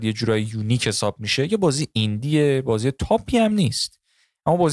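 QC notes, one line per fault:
No faults heard anywhere in this speech recording.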